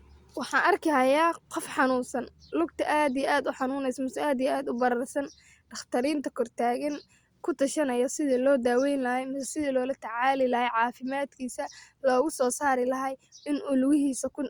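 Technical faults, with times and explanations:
No technical faults detected.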